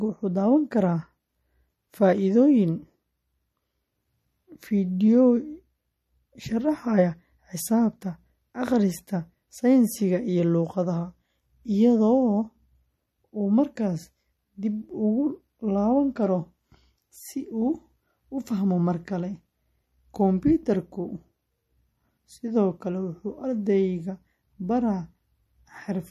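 From start to finish the speech sounds watery and swirly, with plainly audible codec damage and nothing above 13.6 kHz. That is likely MP3 compression: short of bits, the encoder cut the treble and let weak frequency lines flicker between frames, which fits a bitrate near 38 kbps.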